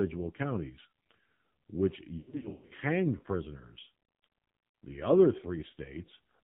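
A speech recording that sounds boxy, buzzy and synthetic throughout, with nothing above 4 kHz and a harsh, reedy edge on the voice. This is the AMR narrowband mobile codec, which rebuilds speech from a vocal-tract model excited by a handful of pulses per subframe. The heavy damage here points to one of AMR-NB's lowest modes, around 5.9 kbps, where too few bits remain to carry natural detail. Between 2.18 and 2.73 s the speech stutters, warbles and smears, with brief fades and rough re-entries. These are lost AMR speech frames. When frames fail their checksum, the decoder repeats the last good pitch and vocal-tract settings at falling gain. The gaps are scattered rather than continuous and add up to roughly a third of a second across about half a second. The longest unbroken gap is about 100 ms, enough for the concealment to audibly fade toward silence before good frames return.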